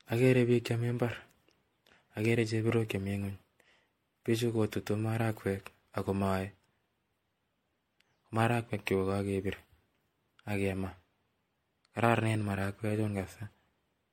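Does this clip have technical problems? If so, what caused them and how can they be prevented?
Yes. The speech was most likely decoded and re-encoded around five times through a lossy codec, generation loss whose sound points to MP3 at about 64 kbit/s. Each pass requantised on a shifted frame grid, so the whole clip sounds swirly, hollow and smeared, with blurred attacks and nothing above 16.6 kHz. To prevent it, keep a lossless master and encode to MP3 only once, at the final delivery stage.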